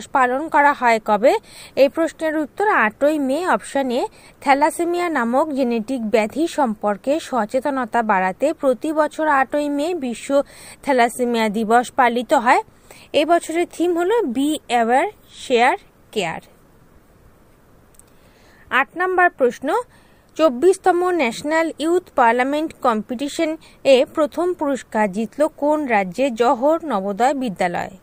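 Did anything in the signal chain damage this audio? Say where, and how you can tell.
No, nothing in the signal chain audibly damaged this audio. No stage from capture to playback leaves a trace that can be heard.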